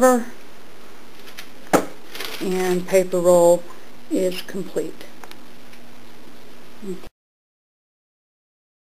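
No technical faults are audible.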